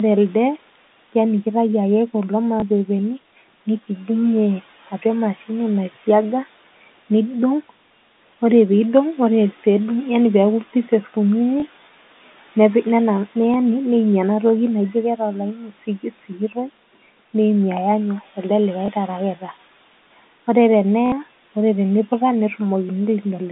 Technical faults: packet loss with last packet repeated; speech cut by the noise suppressor

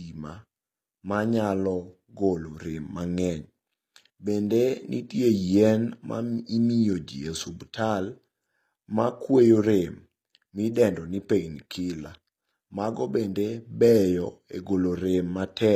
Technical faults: HE-AAC compression

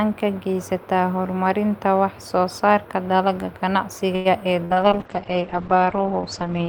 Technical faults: short stall from a late packet; burst of packet loss; call bitrate drop

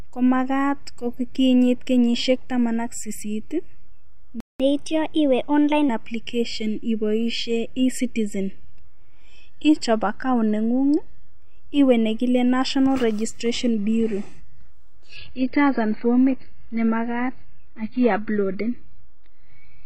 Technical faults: playback stall; catch-up at higher speed; adaptive stream at a lower bitrate

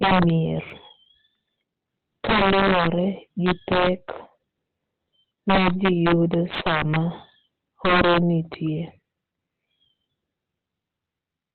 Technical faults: Opus compression; integer overflow; dropped samples

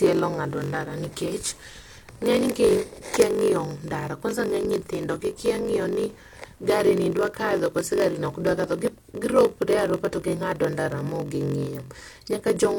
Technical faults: block size mismatch (padded); electrical switching spike

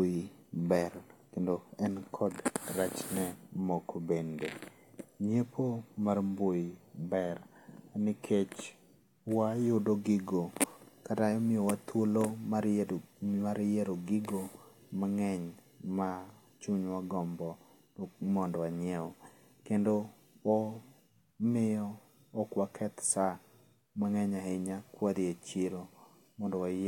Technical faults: none

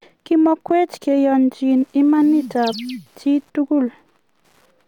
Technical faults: Wi-Fi interference

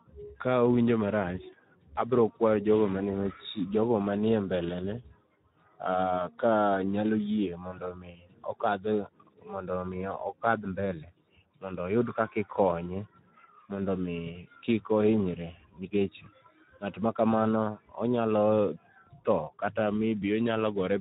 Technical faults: Speex codec

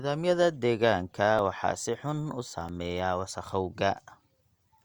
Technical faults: repeated buffer

